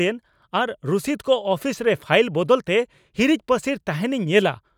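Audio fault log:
Nothing to log here, as this bit of speech comes through without a single fault turning up along the way.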